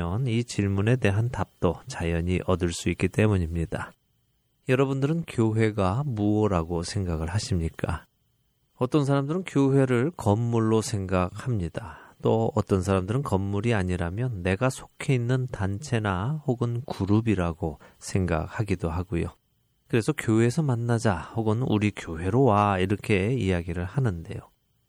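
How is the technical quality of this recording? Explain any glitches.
The recording carries audible compression damage from start to finish. MP3 compression, throughout: the speech has a watery, swirling texture and dulled treble, with sibilants breaking into metallic chirps, likely from an encoder starving for bits, cutting high frequencies and toggling weak spectral lines between frames, which fits a low rate around 64 kbps.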